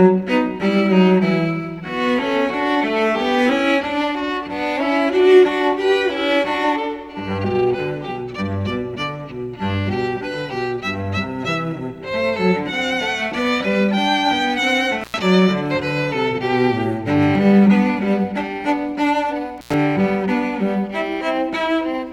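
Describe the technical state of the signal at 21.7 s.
At 21.7 s the signal is intact, with no dropout, distortion, glitch or other technical fault present at that point.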